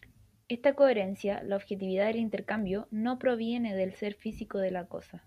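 Three sharp, isolated clicks cut through this speech clip: at 1.12 s just before "la objetividad del", at 2.59 s between "la objetividad del" and "no proviene del ser", and at 4.28 s after "no proviene del ser". Each is likely dropped samples, where a fraction of a millisecond of the stream goes missing. The waveform then leaps to a later value, producing a thin vertical streak in the spectrum while no audible sound is lost.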